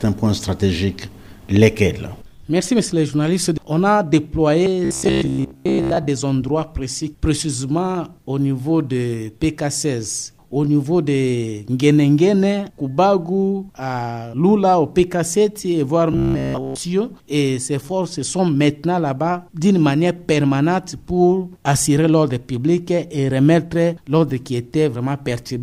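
From 4.85 to 6.08 s, and again from 16.13 to 16.78 s, the sound collapses into a rigid, metallic buzz pitched at 66.8 Hz that only loosely tracks the underlying audio. This is robotic sound from repeated short buffers. The likely cause is audio arriving too seldom, so the player loops the last fragment, about 15 ms long, to fill the gaps, replacing most of the real signal and imposing that fixed pitch.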